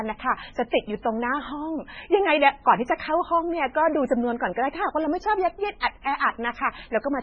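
Throughout the speech the sound is watery and swirly, with nothing above 8.9 kHz and sibilants turning into metallic chirps. This is likely heavy MP3 compression, which fits a very low bitrate near 16 kbps. The encoder cuts the treble and lets weak frequency lines flicker between frames.

At 0.70 to 0.72 s, 1.02 to 1.05 s, 5.80 to 5.83 s and 6.02 to 6.05 s, a brief hiss comes just before a sharp attack, which sounds blunted. This is pre-echo. Quantisation noise meant for the loud onset spreads back 22 to 34 ms into the quiet moment before it.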